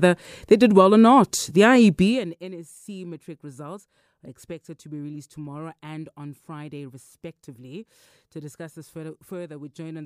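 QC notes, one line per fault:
1.99–2.35 s, zipper noise: the level falls by roughly 20 dB in unsmoothed steps, about 100 per second. Each step clicks, making a zipping buzz.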